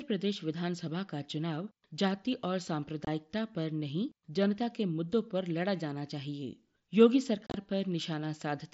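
At 3.05 to 3.07 s and from 7.47 to 7.54 s, unconcealed Bluetooth headset packet loss cuts sharp-edged holes in the speech: about 22 ms first, then 60 ms scattered over 75 ms, heard as brief chopping. Silence or an idle pattern fills the missing packets.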